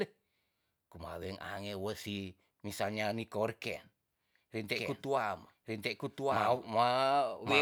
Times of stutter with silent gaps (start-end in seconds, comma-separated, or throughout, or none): none